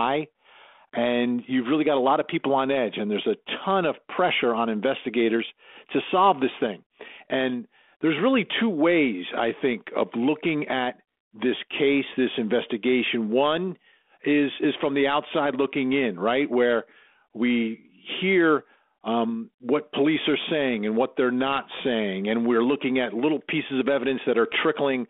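No technical faults occur at any point in the speech, so there is nothing to place in time order.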